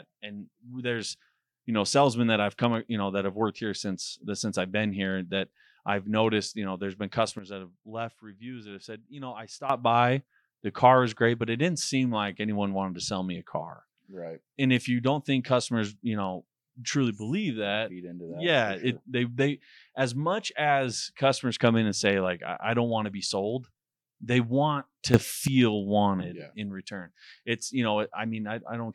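At 7.39 s, after "you know there's been", the speech and its background noise drop together by about 12 dB. They stay there until 9.70 s, returning before "by the car is". At 25.14 s, after "sold they want to", both jump up by about 12 dB until 25.48 s, before "wanted yeah in return". Each is a sudden gain jump. The likely cause is a digital gain change applied between samples without a ramp.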